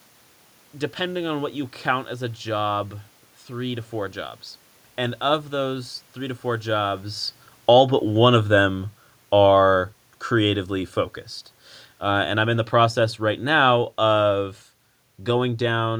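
At 7.54 s the automatic gain falling sets in and runs until 10.84 s. The gain control judged the input too loud, or its background noise too strong, and eased its gain down by about 5 dB over those three-odd seconds, so the speech sinks and the room noise behind it sinks in step. On a waveform the envelope tapers steadily across the span. A spectrogram shows the whole band, noise floor included, dimming together, unlike the change in level around 7 s when the talker moves.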